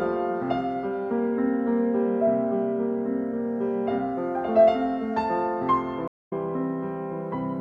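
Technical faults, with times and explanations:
6.08–6.33 s: stream reconnect. The music drops to silence for about 0.24 s as the connection breaks, then a fresh decoder resumes roughly 0.2 s further on.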